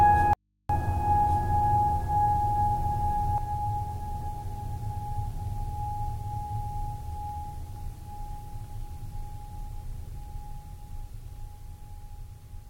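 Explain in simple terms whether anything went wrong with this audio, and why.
Two things went wrong with this music clip, both near the start.

The first is a doubled audio track. From the very beginning until 3.38 s, a second copy of the same music plays about a second behind the first and at roughly the same loudness. The same music was most likely picked up twice, once through a slower route. Unlike a natural echo, the copy never fades away or sounds roomy. It is a clean duplicate that simply stops abruptly at 3.38 s.

The second is an audio dropout to a faint residue. From 0.33 to 0.69 s, about a third of a second, the music vanishes and only a low electrical hum remains, far quieter than the music. The likely cause is that the signal was lost while the equipment after the break stayed switched on. This is not a musical pause or a fade. The cut and the return are both sudden, and the gap holds hum rather than silence.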